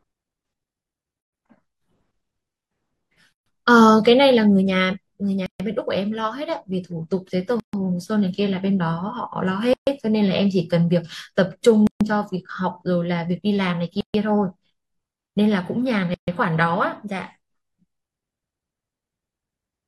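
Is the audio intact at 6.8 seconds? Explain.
Yes, the speech at 6.8 seconds is intact, with no dropout, click, distortion or other fault at that moment.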